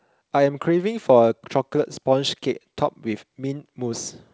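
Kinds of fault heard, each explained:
No faults are present: the speech carries only the expected traces of a call chain, with the deepest bass trimmed by the microphone's high-pass filter and nothing above 8 kHz, a band limit that fits a wideband codec such as G.722 at 64 kbps.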